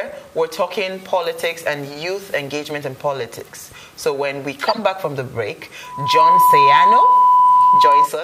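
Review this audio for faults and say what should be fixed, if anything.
A corrupt frame decoded at 4.66 to 4.79 s: damaged bits, played anyway, spray a harsh blip peaking around -5 dBFS across about five frames, seen as a short smear on the spectrogram. Error-checking that conceals bad frames instead of decoding them would prevent it.

A loudspeaker feedback squeal from 5.83 to 8.10 s: the speaker-to-microphone loop runs away at 997 Hz, swelling over about 0.4 s to well above the sound, visible as a bright horizontal line on the spectrogram. More acoustic separation or a notch at that frequency would prevent it.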